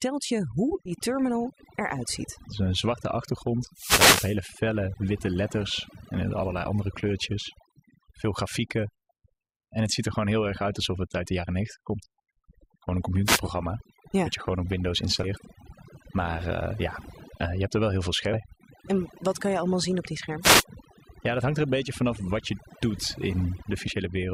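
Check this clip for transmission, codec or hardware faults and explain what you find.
Three faults can be heard: overdone noise removal across the whole recording, five compressed frames skipped, and three wireless microphone noise hits.

Overdone noise removal runs from start to finish. The background sinks to near silence dotted with twinkling specks. A noise reduction stage set too aggressively is pulling individual frequency bands down or out whenever they sit close to its noise estimate. The quieter parts of the speech fall below that threshold and are carved away along with the hiss.

Compressed frames skipped occur at about 0.85 s, 3.89 s, 15.23 s, 18.33 s and 23.87 s. Each one sounds like a jump where the speech lurches forward. The jumps are roughly 70 ms at the first three, around 200 ms at 18.33 s, and about 100 ms at 23.87 s. Those sizes fit whole 20 ms frames going missing or being rejected by the decoder.

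Wireless microphone noise hits appear from 3.68 to 4.44 s, 13.24 to 13.41 s, and 20.41 to 20.65 s. Each is a swish or burst of static that rises over the speech. The first is the longest and also contains one of the frame skips. An analogue FM radio link is fading as reflected signals cancel the direct one, which lets receiver noise climb and partly bury the voice.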